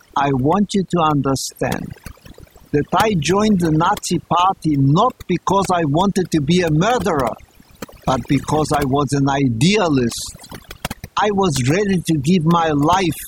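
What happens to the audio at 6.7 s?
At 6.7 s the gaps around the speech fall to near silence dotted with twinkling specks. This is overdone noise removal, present across the whole clip rather than starting here. A noise reduction stage set far too aggressively is cutting individual frequency bands down or out whenever they sit close to its noise estimate, so the quieter components of the speech are stripped away along with the noise.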